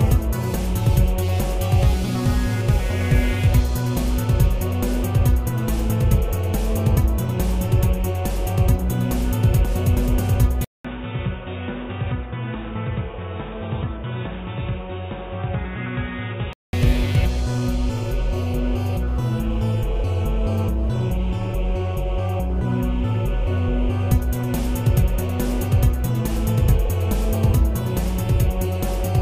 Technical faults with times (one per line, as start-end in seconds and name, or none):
10.65-16.73 input switched to a poorer device